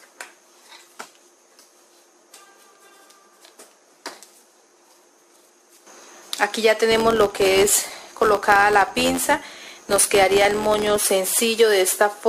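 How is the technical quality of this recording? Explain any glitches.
The recording carries one processing fault. From 6.91 s to 10.99 s a filter restarted on every block produces a buzz at about 86.1 Hz. The filter discards its internal state at each block boundary and begins again from silence, so every block opens with a small transient. These transients repeat at a fixed rate, which fits a 512-sample buffer, and they are heard as a steady buzz whose loudness tracks the level of the sound.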